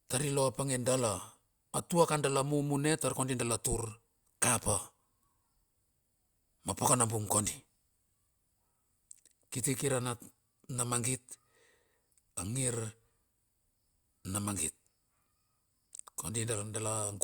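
No audible technical faults anywhere in the speech recording.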